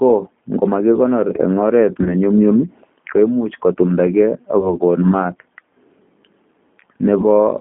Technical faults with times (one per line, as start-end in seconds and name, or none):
0.00-7.61 G.729 codec
2.03-2.15 VoIP packet loss concealed by the speech codec
4.60-4.74 VoIP packet loss concealed by the speech codec
7.20-7.25 VoIP packet loss concealed by the speech codec